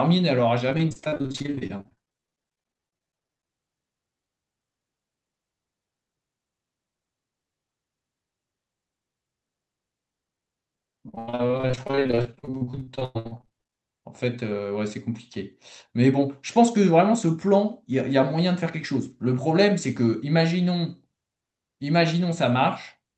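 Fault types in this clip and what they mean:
Repeated packet loss (robotic sound): from 0.69 to 3.51 s and 11.09 to 13.78 s, lost audio is repeatedly patched by stretching the preceding sound, so nearly half of each stretch is filled in and sounds choppy. Spectrograms show smeared, repeated frames, and waveforms show looped segments up to 100 ms long.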